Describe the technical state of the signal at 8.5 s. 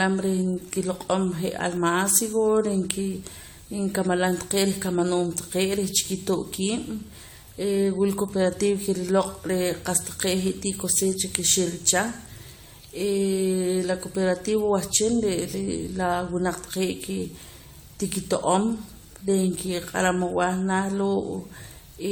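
At 8.5 s the speech sounds swirly, hollow and smeared, with softened consonant attacks, as it does across the whole clip. This is likely generation loss: AAC encoding repeated around ten times, each pass re-quantising on a shifted frame grid, which fits a 96 kbit/s chain.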